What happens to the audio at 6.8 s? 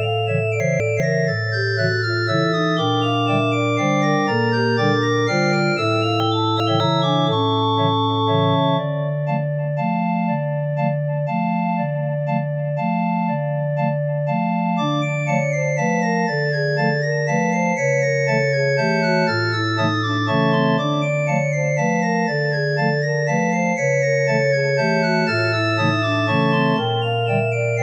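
Chunks out of order run from 6.2 to 6.8 s, and 6.8 s is where that jumbled stretch ends. One 200 ms chunk arrived two chunks late, so it plays after the two that should have followed it. Nothing is missing, but the sequence is scrambled, producing a brief garbled patch with three hard joins. The last of those joins falls at 6.8 s, where the late chunk hands back to correctly ordered audio.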